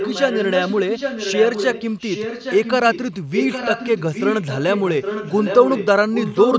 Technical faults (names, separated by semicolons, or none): echo leak